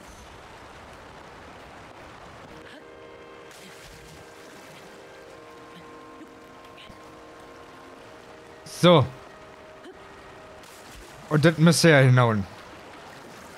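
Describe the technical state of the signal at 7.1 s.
Nothing goes wrong with the signal at 7.1 s; the audio is intact at that moment.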